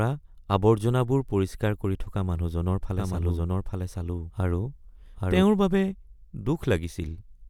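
In this speech recording, a second slower capture path or an out-of-step edit likely causes a doubled audio track from 2.97 to 5.43 s: an equally loud, dry copy trails roughly 0.7 s behind, cutting in and out abruptly.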